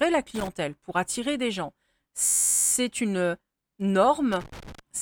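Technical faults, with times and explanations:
0.35–0.48 s and 4.32–4.79 s, loose connector crackle: irregular bursts of scratchy crackle as a worn or dirty contact makes and breaks, chopping the signal. Unlike a hang loop, the pattern is random, with no steady repetition or pitch.
2.25–2.72 s, system hang loop: an 11.61 ms slice of speech repeats exactly, about forty times, producing a steady buzz at 86.1 Hz. This fits a frozen driver leaving the hardware cycling a 512-sample buffer. Its even, pitched regularity sets it apart from crackle.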